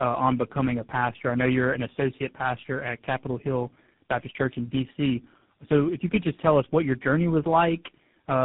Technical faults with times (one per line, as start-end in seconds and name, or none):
0.00-8.44 tandem speech coding